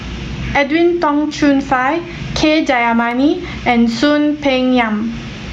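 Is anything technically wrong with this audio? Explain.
Yes, there are two faults in this speech.

Gain pumping runs throughout. The gain is likely set far too high, with a fast limiter clamping down on each loud syllable. The gain swings by around 15 dB, leaving the speech squashed.

Dropped samples occur at 3.11 s, likely a handful of samples, about a tenth of a millisecond, missing from the stream. The waveform jumps abruptly to a later value, heard as a single sharp click, far too brief to remove any sound.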